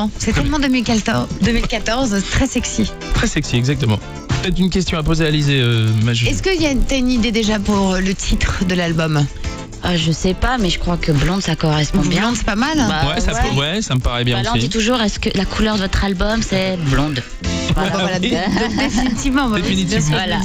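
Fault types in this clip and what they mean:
Resampler restarted on every block: the sample-rate converter was reset at each block boundary instead of carrying its filter history across, so every block edge gets a small discontinuity. Here the blocks are 20 ms long, so the errors recur at 50 Hz throughout the clip and fuse into a low buzz at that rate, audible only while sound is present. The conversion was upsampling, from 16 kHz to 48 kHz.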